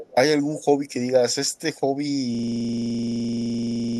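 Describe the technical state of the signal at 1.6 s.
At 1.6 s the speech signal is intact, with no audible fault at that moment.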